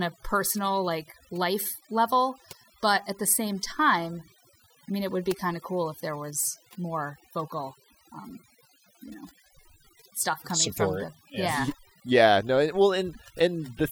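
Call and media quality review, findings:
Overdone noise removal, whole clip. Noise suppressor set far too aggressive: bands near its noise estimate get pulled right down, so background drops and breaks up into twinkly specks, and quieter parts of the speech go too. Back the strength off.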